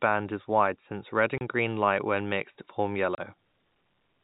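A speech recording over G.711 telephone coding, band-limited below 4 kHz, with packet loss filled with silence. Two 30 ms holes, at 1.38 s after "is wide since red" and at 3.15 s after "light when mixed form", each fit one lost packet. Unlike concealment, nothing is repeated or smeared. The gaps are dead silent with hard edges.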